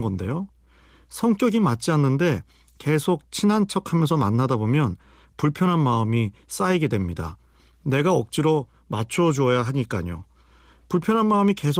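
Nothing in this speech recording stood out as a technical problem on listening.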